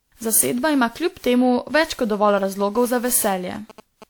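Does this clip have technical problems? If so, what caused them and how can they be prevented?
Yes, there are two. The whole speech clip has the swirly, hollow, smeared quality of generation loss, with consonant attacks blurred and nothing above 20.1 kHz. That's likely the result of around ten rounds of lossy re-encoding, and the character points to WMA at something like 128 kbit/s. Each pass quantises on a fresh frame grid, so the noise and spectral holes pile up well beyond what that bitrate would cause once. To prevent it, keep a lossless master and encode to a lossy format only once, at the end.

From 2.14 s to 4.04 s, just after "kljub temu več kot", there are GSM signalling bursts: a galloping dit-dit-dit of short 217 Hz buzzes, sitting about 20 dB below the speech. A nearby 2G phone was exchanging short radio bursts with the network, and the audio circuitry rectified them into the signal. 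Keeping phones well away from the recording chain, or switched to flight mode, avoids it.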